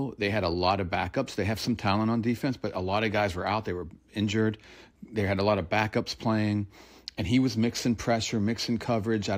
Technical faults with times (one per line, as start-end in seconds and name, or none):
none